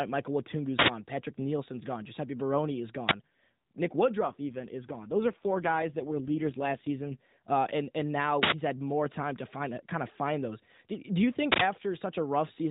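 Right at 0.79 s there's an uninitialised buffer: a loud blast of digital noise lasting about 93 ms, which fits a 4096-sample buffer getting played before any audio landed in it, so whatever junk sat in memory came out as samples. A shorter one hits at 3.09 to 3.11 s, around 23 ms, pointing to a 1024-sample block. The same 93 ms burst comes back at 8.43 s, right after "uh and and now" and just before "had more time to", and again at 11.52 s following "do you".

Between 4.20 and 7.39 s, ending just before "uh and and now", there's an AMR rate drop. The bandwidth doesn't change and nothing cuts out, and like the rest of the clip it's still the narrowband mobile sound with nothing above 4 kHz. But the voice goes rougher and buzzier, more synthetic. That points to the network pushing the codec down from 12.2 to something like 5.9 kbps and spending the freed bits on error protection, then stepping back up.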